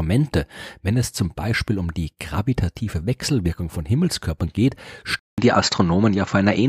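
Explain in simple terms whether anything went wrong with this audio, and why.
At 5.19 s the speech drops out for about 0.19 s, then returns duller, at a slightly different level and with a faint new background noise, with nothing above 7.6 kHz until the end. The likely cause is an input switched to a poorer device.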